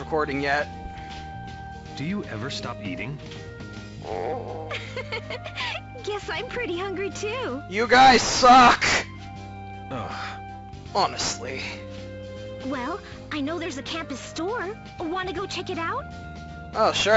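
No technical faults can be heard anywhere in this recording.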